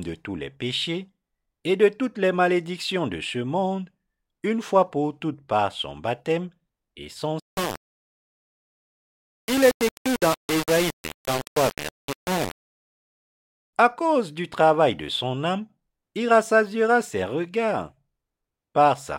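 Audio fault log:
7.40–13.73 s, low bit depth without dither: right after "son baptême et son" the speech turns coarse and grainy, with distortion that tracks the voice and sits only about 10 dB below it. This is likely a 4-bit rounding. The waveform shows visible stair-steps, and the spectrogram shows broadband hash that follows the syllables.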